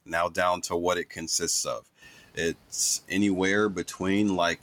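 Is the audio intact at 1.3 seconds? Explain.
No, 1.3 s sits inside a stretch of speech cut by the noise suppressor, running from 1.15 to 1.42 s, right after "what it". The suppressor mistook part of the speech for background and pulled it down along with the noise, by about 9 dB at its deepest, over roughly 150 ms in total. You hear it as the sound going faint and swallowed there, with the softer bits dipping away.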